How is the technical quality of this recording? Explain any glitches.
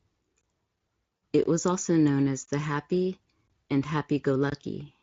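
The recording has two kinds of glitch: regular dropouts and one brief concealed packet loss. The speech is carried through a Speex codec, whose coding damage is light.

Gap between chunks, at 0.41, 1.43, 2.46, 3.48 and 4.50 s: the audio was delivered in blocks about one second long, and each join leaves about 21 ms of silence, likely from padding or a late start on each new block. No speech is lost, but the flow is cut each time, giving short holes at a steady one-second rhythm.

VoIP packet loss concealed by the speech codec, from 1.17 to 1.21 s: about 40 ms of data went missing, which fits two 20 ms frames. The decoder filled the hole by extending its last pitch and spectral shape while turning the level down. The speech briefly smears into a fading tone or noise, and because each frame depends on the one before, it stays weak or distorted for tens of milliseconds after the stream resumes.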